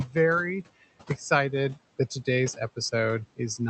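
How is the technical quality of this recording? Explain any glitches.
The recording is held back by noise suppressor artifacts running through the whole speech clip. The suppressor estimates the steady room noise and pulls those bands down by about 17 dB, frame by frame. The background drops away in the gaps between phrases and swells back under the speech. The room noise sits about 19 dB below the speech, and the call codec's top end stops near 8 kHz, consistent with Opus at roughly 32 kbps.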